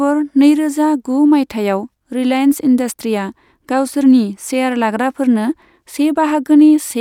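Speech recording with no audible technical faults at any point.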